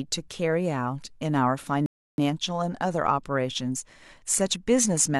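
The player ran dry of downloaded audio in this speech clip, a rebuffering stall lasting from 1.86 to 2.18 s while it waited for more data. The speech cuts to silence for about 320 ms, then resumes exactly where it stopped, so nothing is skipped but the clip runs longer.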